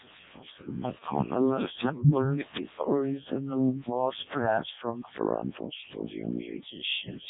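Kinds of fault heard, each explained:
Codec 2 vocoder: The speech is rebuilt from pitch, voicing, energy and a rough spectral envelope, not the original waveform. At about 0.7 kbit/s the damage is heavy. It sounds robotic and buzzy, synthesised from sine waves, with nothing above 3.7 kHz.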